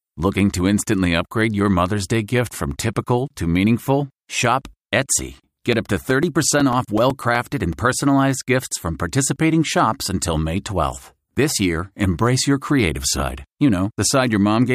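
From 5.35 s to 7.73 s the speech is broken by periodic USB or driver dropouts. Every 0.125 s, eight times a second, a few milliseconds of audio vanish and are replaced by silence, as if something is stalling the USB bus or audio driver on a fixed schedule. About twenty evenly spaced gaps result, heard as a regular ticking or popping that follows the speech and goes quiet whenever there is no signal.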